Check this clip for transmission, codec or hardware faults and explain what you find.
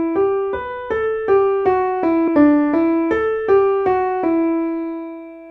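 One fault: damaged data in a compressed stream, from 2.23 to 2.29 s. Corrupted frames lose decoder sync until the next header, giving a brief glitch.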